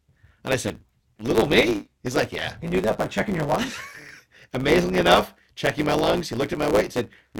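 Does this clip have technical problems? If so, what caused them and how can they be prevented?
Yes. A truncated block size mismatch runs throughout: each block is cut short before the next stage reads it, producing a 109 Hz buzz and speech running 1.09 times fast with its timbre intact. A spectrogram shows vertical seams every 9.2 ms; the waveform shows matching jumps. Matching block sizes between stages, or buffering the difference, prevents it.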